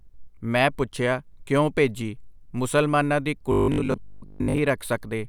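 From 3.52 to 4.58 s, after "ਕਿਉਂ ਭੇਜੀ ਮੁਸਲਮਾਨਾਂ ਦੀ", robotic sound sets in: a rigid 50 Hz buzz, likely from repeating short 20 ms buffers that replace most of the real audio.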